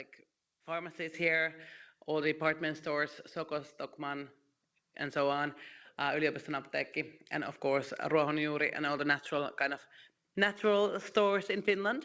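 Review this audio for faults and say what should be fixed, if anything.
At 1.14 s, speech and background jump up together by about 7 dB. The microphone volume stepped up because the call software raised the device's input level in one step. To prevent it, set the microphone level before the call and turn off automatic input volume adjustment in the call software.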